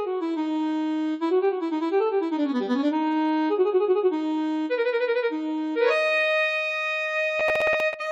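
Right near the end, from 7.40 to 7.94 s, there's processor overload crackle. The machine keeps missing its deadlines on short buffers, around 10 ms each, so about ten chunks get replaced by stale audio with hard edges. You hear a gritty, tearing burst that stops when the overload clears.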